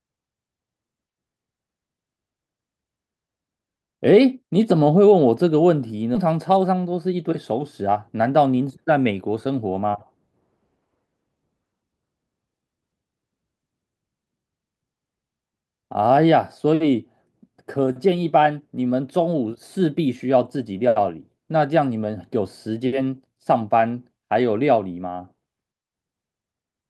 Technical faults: skip ahead; jitter buffer speed-up

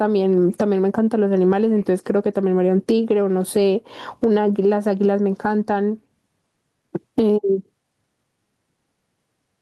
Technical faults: gain pumping

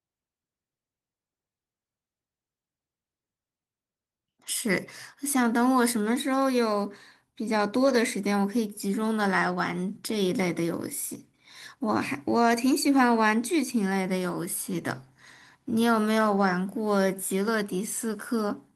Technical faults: none

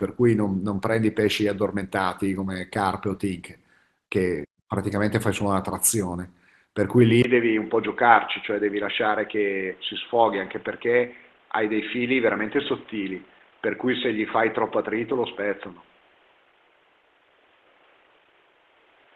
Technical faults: input switched to a poorer device

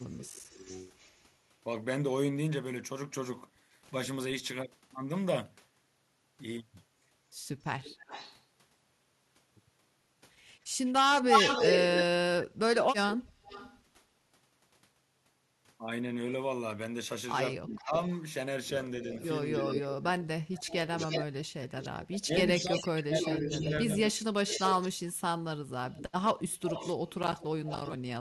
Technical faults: echo leak; speech suppressed in double talk

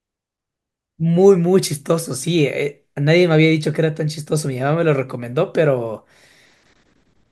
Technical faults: none

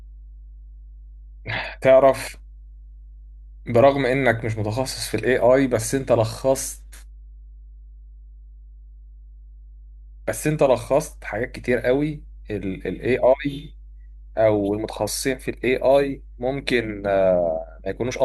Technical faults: mains hum

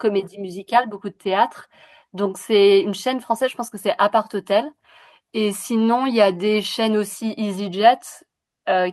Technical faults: none

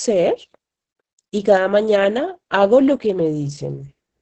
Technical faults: Opus voice compression

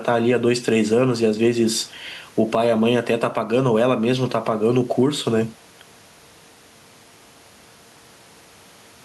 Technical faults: gain pumping

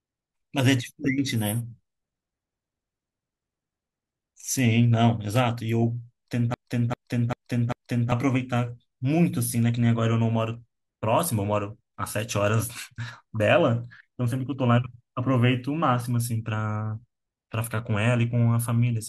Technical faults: broken-record loop

